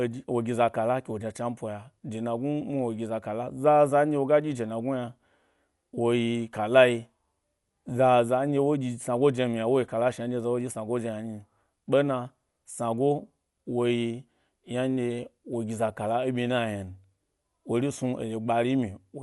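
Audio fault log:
Throughout: likely Dolby Digital compression, a dull band cut above about 11.5 kHz with rough, fluttering dither noise, which fits a 64 kbps stream. The spectrogram shows a hard ceiling and speckled gaps.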